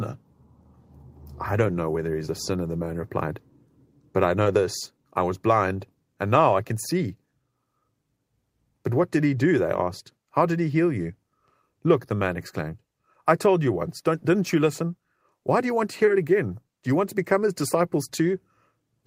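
At 1.59 to 1.73 s the speech turns briefly rough and grainy for about 80 ms without breaking off. This is a lost packet rebuilt from error correction: several separate lost packets, consistent with four 20 ms frames, were replaced by the lower-bitrate backup copies carried in the following packets, so the gap is filled with coarser, noisier sound.

At 4.43 to 4.47 s, between "but I" and "this I was blind", a short smear or wobble replaces about 20 ms. This is short concealed packet loss: the decoder extended the preceding sound to fill the missing slice and then blended back into the real audio. The final part of this stretch, from 4.45 to 4.47 s, also carries the rougher texture of a frame rebuilt from error correction.

The same brief 20 ms roughness, each time a single lost packet rebuilt from error correction, appears at 6.35 to 6.37 s, at 9.57 to 9.59 s just after "what did he do", and at 17.61 to 17.63 s.

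At 16.05 to 16.09 s, between "do you want to" and "it again", there is another short concealed packet loss. About 20 ms is smeared over by continuation from the previous sound, and the closing part, 16.07 to 16.09 s, has the grainier quality of a frame rebuilt from error correction.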